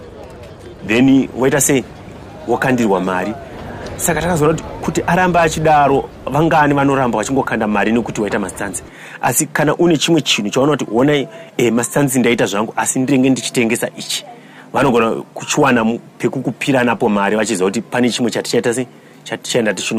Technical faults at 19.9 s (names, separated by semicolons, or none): none